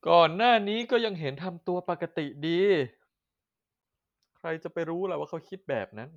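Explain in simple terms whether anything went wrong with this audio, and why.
Near the end of the speech, from 5.46 to 5.49 seconds, there is a corrupt frame decoded. The audio was stored in small compressed chunks called frames. Some of the data in a single frame got scrambled, and the player played it anyway. The bad data put sound at the wrong pitches for a few hundredths of a second. You hear it as a brief, quiet blip or chirp that doesn't belong to the voice.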